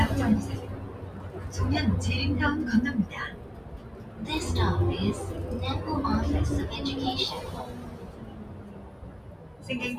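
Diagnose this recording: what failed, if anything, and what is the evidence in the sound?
A noise suppressor in the call-processing stage, a speech-tuned noise suppressor applied to music or sounds, stayed active on non-speech audio. It treats sustained, steady content as background noise and keeps adjusting its gain, so level swings by about 10 dB across the clip. Sharp onsets pass through largely intact, but held portions and decays are pulled down. The result is a pumping, fluttering, thinned character.

The same suppressor also produced distinct episodes of sound cut by the noise suppressor, at 0.6 to 1.5 s, 3.31 to 4.21 s and 7.68 to 9.67 s, each dipping by up to about 6 dB. Within these stretches the algorithm judged the ongoing sound to be noise and attenuated it harder than its surroundings. Steady and fading components sink and their tails are clipped short, while abrupt transients still come through.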